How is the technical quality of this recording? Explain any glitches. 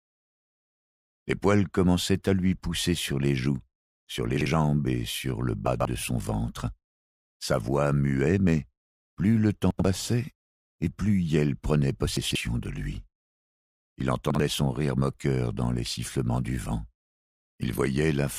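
The recording has five brief glitches caused by chunks out of order, at 4.37–4.46 s, 5.67–5.85 s, 9.71–9.85 s, 12.17–12.35 s and 14.30–14.40 s. In each, a 46 ms block arrived one to three blocks late and played after its successors. Each sounds like a short jumbled stutter. The waveform shows three abrupt discontinuities, and the spectrogram shows thin vertical broadband lines with shuffled segments between them.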